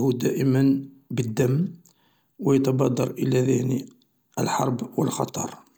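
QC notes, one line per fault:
1.37 s, block of digital silence: the audio drops to silence for about 0.67 ms and returns with no fade, which fits a few dozen samples left unfilled when an output buffer missed its deadline. Both hard edges merge into a single sharp tick.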